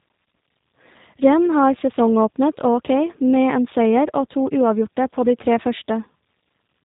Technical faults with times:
0.00-6.84 tandem speech coding

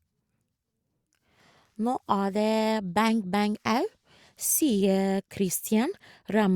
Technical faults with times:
none

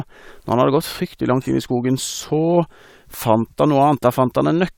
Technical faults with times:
none

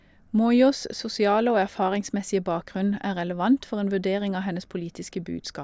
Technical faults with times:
none

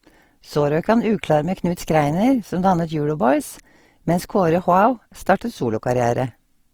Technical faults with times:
0.00-6.73 Opus compression

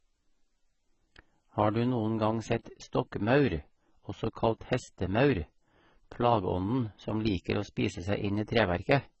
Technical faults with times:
0.00-9.20 AAC compression

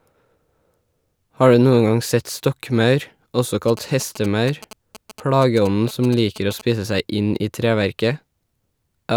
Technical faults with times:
3.68-6.61 GSM signalling bursts

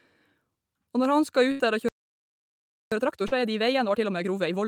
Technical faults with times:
1.51-1.61 burst of packet loss
1.88-2.92 playback stall
2.92-4.68 time-compressed catch-up
3.27-3.33 short concealed packet loss

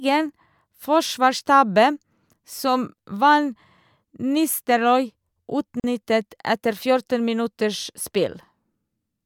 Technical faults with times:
5.80-5.84 gap at a join of encoded pieces

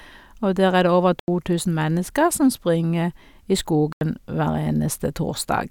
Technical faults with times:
1.19-1.28 block of digital silence
3.93-4.01 block of digital silence

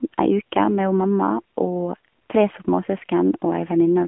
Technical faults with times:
0.00-4.07 AMR narrowband mobile codec

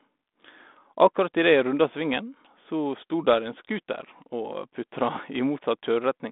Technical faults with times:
none

